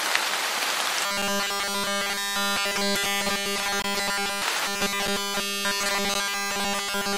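Robotic sound from repeated short buffers runs from 1.05 to 4.42 s and again from 4.67 s to the end. It is likely caused by audio arriving too seldom, so a roughly 5 ms fragment loops almost continuously, imposing a rigid, metallic 200 Hz buzz over the sound.

Blocks of digital silence interrupt it at 1.22 s (5.3 ms), 3.82 to 3.84 s (21.3 ms) and 6.14 s (10.7 ms). Zeroed output samples cut the audio abruptly: the short ones tick, and the longest leaves a brief hole.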